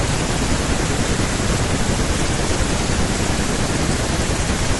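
The speech appears to have gone through low-delay AAC compression, likely AAC-ELD as used for video calls, at a rate that fits about 32 kbps. Its very short frames cannot separate closely spaced pitch harmonics well, and too few bits remain to code them cleanly. Throughout the clip the voice sounds plainly rough and grainy, with a noisy haze filling the gaps between harmonics and a thin, artificial-sounding top band.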